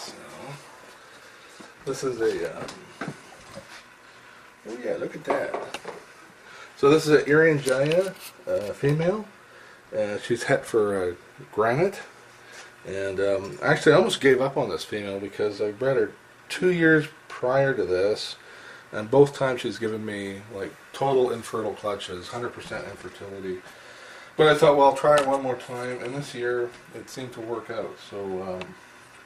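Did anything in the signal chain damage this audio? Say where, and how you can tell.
Yes, the network jitter buffer is the culprit. There's clock drift between sender and receiver: the sender's clock runs roughly five percent fast, so packets arrive quicker than they're played out and the buffer keeps creeping toward overflow the whole way through.

To cope, the receiver makes repeated timing corrections from 0.11 s to 29.09 s, trimming little slices so playback runs at 104% speed. Where audible at all, they come across as small, irregularly spaced hiccups and a slightly rushed, uneven pace, all pushing the same way.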